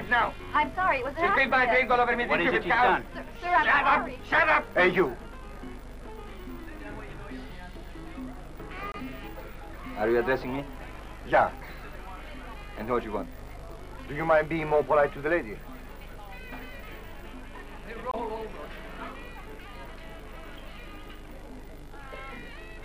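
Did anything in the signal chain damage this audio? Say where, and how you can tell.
Yes. At the codec stage, a corrupt frame was muted twice: flipped bits made the decoder reject a compressed frame, and the player filled the gap with silence instead of sound. The audio cuts out abruptly from 8.92 to 8.96 s and again from 18.11 to 18.14 s, each hole about 40 ms and 24 ms long, consistent with a single lost frame. Timing after each gap stays intact, which rules out a buffer dropout.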